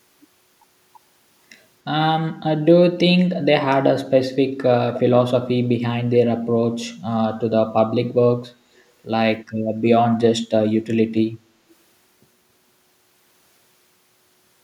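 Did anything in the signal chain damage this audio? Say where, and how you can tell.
Yes, at the call-processing stage: brief echo leak at 4.94–5.0, 6.13–6.18, 6.78–6.85 and 9.4–9.44 s, faint scraps about 15 to 35 dB down, repeating the speech 282 ms later (269 ms at 9.4 s). The fixed delay and separate repeats rule out room reverberation. The likely cause is a far-end echo canceller missing loudspeaker pickup.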